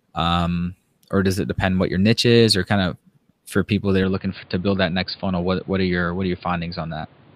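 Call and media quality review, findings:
Input switched to a poorer device, 4.03 s to end of clip. Speech abruptly dulls, nothing above 4.8 kHz, new background noise roughly 30 dB down, no gap or level jump at the switch. Likely capture path moved to a narrower-band microphone or headset call profile.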